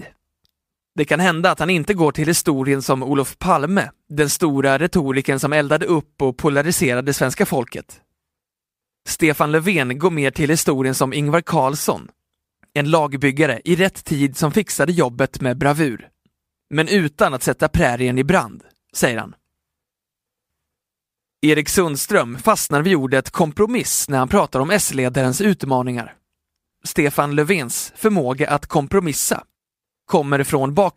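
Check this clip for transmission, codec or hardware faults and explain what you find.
No faults detected in this recording.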